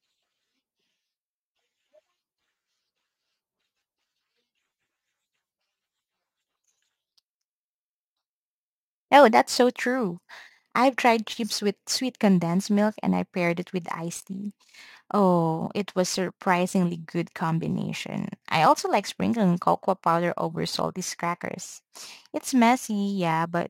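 Crude rate conversion runs throughout: dropped samples, fitting a 48 kHz to 44.1 kHz change, leave a gritty inharmonic fizz about 25 dB under the speech.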